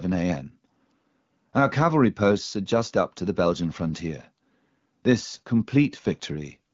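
No faults found in this speech clip, whose wideband telephone character fits an AMR wideband (HD Voice) path running at around 12.65 kbit/s as intended.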